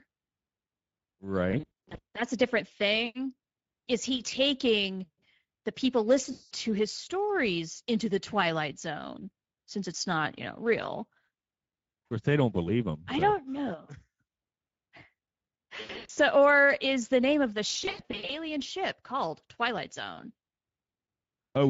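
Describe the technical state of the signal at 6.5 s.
At 6.5 s the signal is at the tail of a burst of VoIP packet loss concealed by the speech codec, running from 6.31 to 6.54 s. About 200 ms of audio went missing, which points to roughly ten lost frames. The decoder extended its last pitch and filter state with falling gain, so the speech smears into a buzzy tone or coloured noise that fades, and stays weak briefly after real packets resume. The whole clip also carries plainly audible Speex codec damage: hoarse, noisy speech from the sparse excitation coding, consistent with a mid-rate setting near 17 kbps.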